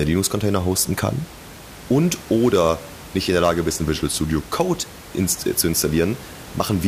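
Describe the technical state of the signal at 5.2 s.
At 5.2 s the speech signal is intact, with only the room's own background noise sitting about 19 dB below the voice as part of the recording.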